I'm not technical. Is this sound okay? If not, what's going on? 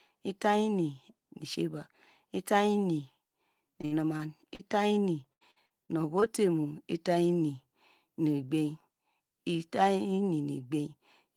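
No, there are two rough patches, from 3.81 to 4.61 s and from 5.33 to 6.24 s. That's repeated packet loss (robotic sound): bits of the speech keep dropping out, up to about 77 ms at a time, and each hole gets patched by stretching the last sound, so it goes choppy.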